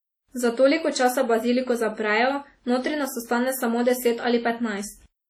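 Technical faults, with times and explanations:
Throughout: WMA compression. The speech was likely passed through a simple early WMA transform encoder at a bitrate around 32 kbps, whose long blocks smear quantisation noise over tens of milliseconds, so the voice rings and sounds washy, with a hiss that breathes with it.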